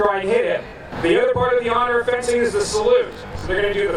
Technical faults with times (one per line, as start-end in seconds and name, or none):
0.00-3.96 channel delay (doubling)
0.68-0.72 Bluetooth stutter
3.07-3.43 Bluetooth stutter